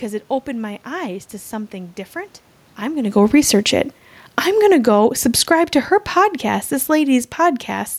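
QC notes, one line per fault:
2.82 to 7.93 s, automatic gain falling: The gain control decides the input is running hot and eases its gain down, about 9 dB over roughly five seconds. The room noise sinks right along with the voice, which is how you can tell it's the gain stage and not the source. The talker also shifts position around the 3-second mark, but that's a level change at the mic and doesn't account for the background dropping too.
4.94 to 5.95 s, automatic gain rising: Partway through that long fade, the gain control swings the other way and pushes its gain back up by about 6 dB over about a second. Voice and room noise swell together, so it reads as the whole sound lifting rather than anyone getting closer. Pulling down, then pushing up inside the same stretch makes the overall level feel like it's pumping.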